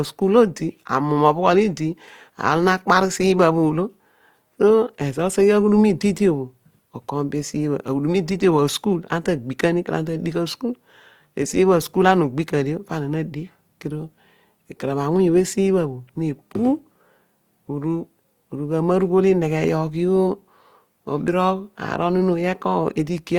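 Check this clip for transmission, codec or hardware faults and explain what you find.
One codec fault is present for the whole clip.

Throughout, likely Opus compression in CELT mode near 24 kbps fills starved bands with folded or noise energy, making the speech plainly grainy and rough.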